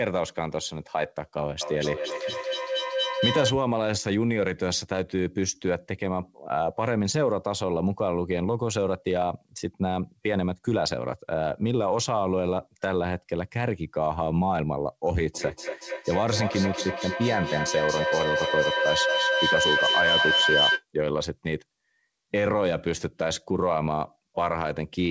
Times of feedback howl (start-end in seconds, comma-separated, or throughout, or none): 1.61-3.59, 15.34-20.85